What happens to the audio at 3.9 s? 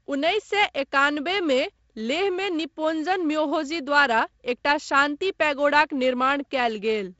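Nothing goes wrong at 3.9 s: the speech there carries on intact, with only the wideband G.722 coding it passes through throughout, which leaves nothing above about 7.7 kHz.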